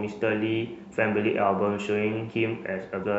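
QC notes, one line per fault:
3.02–3.04 s, damaged data in a compressed stream: a brief glitch near the clip's end, where corrupted frames are misread before the decoder resyncs, unlike a dropout's silence.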